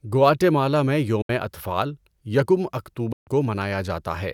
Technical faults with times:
1.22-1.30 Bluetooth dropout
3.12-3.27 Bluetooth dropout

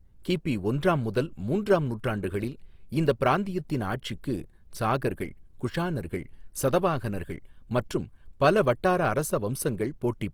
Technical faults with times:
0.00-10.34 Opus compression

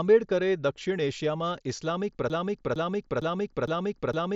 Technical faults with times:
2.30-4.35 broken-record loop

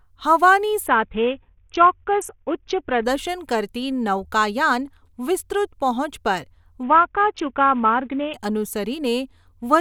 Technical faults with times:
0.86-3.04 Bluetooth SBC bit pool drop
6.83-8.34 Bluetooth SBC bit pool drop

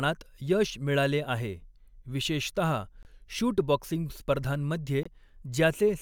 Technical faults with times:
3.03-3.06 corrupt frame muted
5.03-5.07 corrupt frame muted

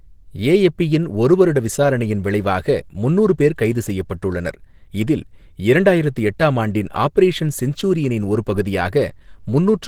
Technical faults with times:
0.00-9.87 Opus compression

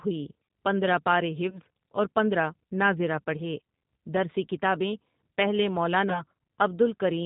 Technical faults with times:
0.00-7.25 G.729 codec
1.50-1.59 VoIP packet loss concealed by the speech codec
6.10-6.22 VoIP packet loss concealed by the speech codec

